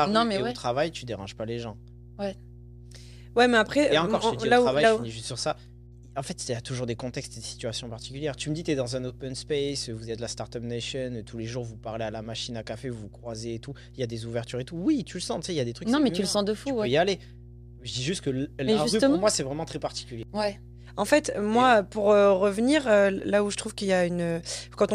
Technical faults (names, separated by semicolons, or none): mains hum